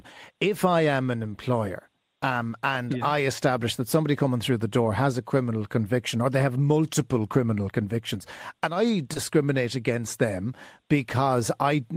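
At 1.23 s, just after "I am an" and before "employer um and yeah", there's a lost packet rebuilt from error correction. A single 20 ms packet went missing, but the next one carried a low-bitrate copy of it, so the decoder played that copy and there's no gap. That frame just comes out rougher and noisier than the audio around it, a quick grainy patch.

Then from 9.13 to 9.17 s, between "criminal convictions and I" and "against them", two problems hit back to back. First comes a short concealed packet loss. About 20 ms arrived too late to use, and the receiver covered it by stretching out the sound it had just played before blending back in. You get a brief smear there rather than a dropout. Right after, at 9.15 s, the next 20 ms packet is another one rebuilt from error correction, so the lower-quality backup copy adds more roughness.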